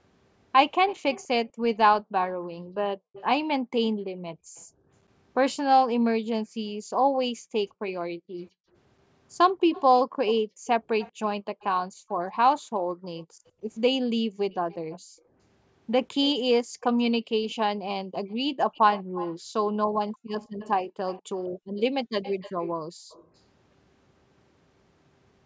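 From 0.88 to 4.61 s there's a faint repeat of the speech trailing it by 199 ms, sitting around 20 dB under the main signal. That's most likely an echo leak: the far end is on a loudspeaker, and its echo canceller let part of what the mic picked up slip back down the line. The same 199 ms repeat returns from 9.73 to 11.65 s and from 13.17 to 23.28 s, a bit stronger, roughly 15 dB down, so it's easier to catch.

Overlapping that, from 1.47 to 17.27 s, the room sound keeps ducking out. That's background gated by the echo canceller. While the loudspeaker plays, the canceller clamps the mic hard, up to about 40 dB at the deepest. Those dips add up to around five seconds in that span. The background drops away, then comes back as the canceller releases. It happens again from 19.03 to 23.1 s, for about a second in total. The band stops at 8 kHz, which is just the call's normal mic processing.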